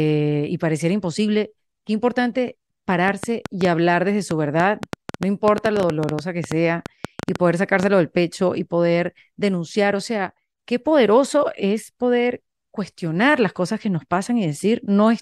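From about 3.08 to 7.84 s there's a train of clicks, around 6.5 per second at an uneven pace, roughly thirty in all, popping well above the speech and through the gaps too. Likely interference from nearby equipment or a faulty connection or power supply.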